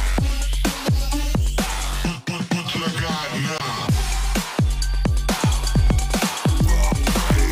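At 3.57 to 3.61 s, damaged data in the compressed stream gives a brief glitch. Part of the encoded stream was corrupted, so the decoder misread the frames there, lost sync and hunted for the next valid frame header before resuming. The waveform shows a discontinuity where playback picks up again.

From 5.29 s to the end, a doubled audio track appears. A second full-band copy of the sound runs about a second behind the original, at roughly the same loudness. This is likely from the audio being captured again through a slower path, or an edit leaving two offset copies. It enters abruptly, with no decay or room colouring. A spectrogram shows each pattern repeated about a second later at equal strength, and the waveform's envelopes overlap and thicken from 5.29 s.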